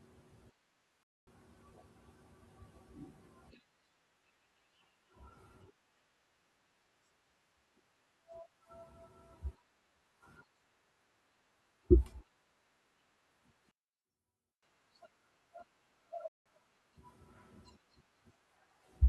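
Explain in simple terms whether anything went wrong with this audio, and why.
Two kinds of fault can be heard in this speech clip. The first is a digital wireless dropout, which happens twice: from 1.03 to 1.27 s, and again from 16.28 to 16.46 s. The sound simply stops for about a quarter of a second, then under a fifth of a second. There is no crackle or hiss around either gap. That clean silence is how a digital radio link behaves when too much data goes missing. The receiver mutes instead of playing damaged sound.

The second fault runs from 13.71 to 14.63 s. The voice suddenly drops to a faint trace and then returns. The likely cause is one channel inverted. One side of the stereo signal is flipped upside down. When the two sides are combined, the matching parts cancel, and the centred voice nearly disappears.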